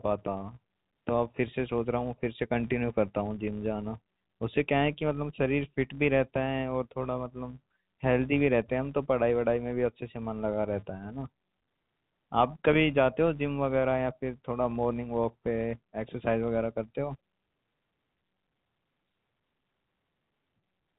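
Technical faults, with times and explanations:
throughout, filter restarted on every block: a 188 Hz buzz rides on the speech because the filter loses its state and starts each block from silence. The repeat rate fits a 256-sample block. Unlike steady mains hum, it swells and fades with the speech level.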